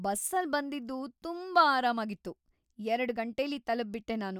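No technical faults can be heard in the recording. There is nothing here to place in time or describe.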